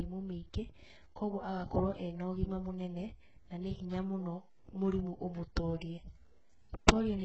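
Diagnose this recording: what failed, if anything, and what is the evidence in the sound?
Across the whole clip the speech has a synthetic, brittle top end: s sounds come out gritty and lispy, the upper band sounds pasted on rather than natural, and nothing reaches above 8 kHz. The damage is heavy throughout. This points to the codec stage, likely HE-AAC compression at a very low bitrate, around 8 kbps. Only the lower band is genuinely coded, and the treble is rebuilt by copying lower bands upward under a coarse envelope, so its harmonics misalign with the real ones below.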